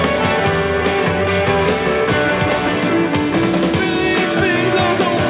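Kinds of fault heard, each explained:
No kinds of fault are heard; the lack of anything above 4 kHz is simply the normal band limit of the call path's G.711 codec.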